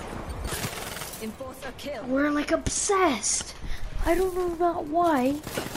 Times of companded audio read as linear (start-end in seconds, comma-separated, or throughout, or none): none